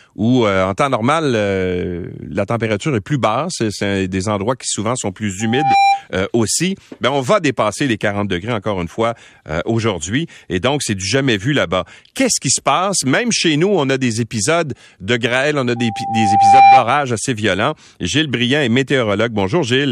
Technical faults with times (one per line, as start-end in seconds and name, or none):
5.40-6.04 loudspeaker feedback squeal
15.76-16.86 loudspeaker feedback squeal